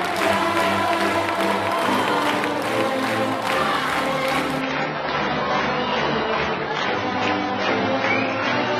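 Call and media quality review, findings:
Adaptive stream at a lower bitrate, 4.61 s onward: sudden drop, no gap, more codec artefacts; spectrogram shows a hard ceiling at 7 kHz, which fits an AAC switch from 96 to 16 kbit/s.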